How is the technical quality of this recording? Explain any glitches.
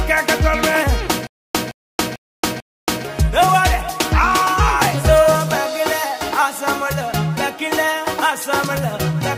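There's one clear glitch: a stutter with silent gaps from about 1.27 s to 3.05 s. A short fragment of roughly 167 ms plays, then cuts to dead digital silence for about 278 ms, and the same fragment comes back again, four times in all, on a steady 444 ms cycle. That pattern most likely comes from a stalled player or stream replaying its last buffered chunk on each retry. Whatever should have played during that stretch is simply gone.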